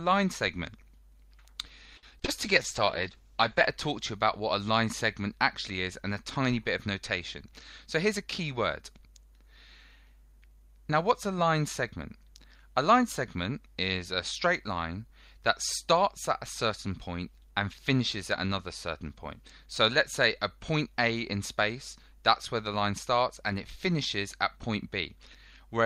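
From 1.97 to 2.30 s, repeated packet loss (robotic sound) sets in: several gaps, the longest 55 ms, are bridged by stretching the preceding sound, so about a third of the span turns choppy rather than simply silent. From 2.34 to 2.72 s a jitter buffer slow-down follows. Repeated pitch periods add 36 ms and the audio plays at 92% speed without any drop in pitch, which sets it apart from a tape-style slowdown. Overlapping this, from 2.44 to 3.75 s, a call bitrate drop makes the sound coarse, watery and dulled at the top end, which fits the encoder falling from about 48 to 12 kbps for roughly 1.2 s. The audio stays continuous, unlike the broken-up loss episode. From 7.45 to 8.37 s a jitter buffer speed-up trims short pitch-period pieces, around 70 ms in all, so the sound runs at 106% speed and feels hurried while its pitch holds steady.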